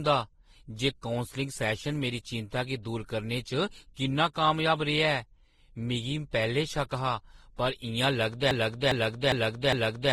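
From the start the speech carries the layered smearing of transcoding between lossy codecs, likely a Vorbis encode at around 29 kbit/s later re-encoded as Opus at around 24 kbit/s. Each pass treated the previous one's artefacts as real signal, so the artefacts of both codecs sit on top of each other. Nothing reaches above 12.2 kHz. On a spectrogram this shows as a flat ceiling and speckled, blotchy patches in the upper bands.

At 8.51 s a broken-record loop takes over and runs to the end. A 0.41 s fragment repeats back to back, four times, because the stream likely stalled and kept resending its last buffered piece. It sounds like a stuttering, mechanical chant, and the speech that should follow is gone. The waveform shows identical blocks tiled at exact 0.41 s spacing, and the spectrogram shows the same pattern stamped out repeatedly.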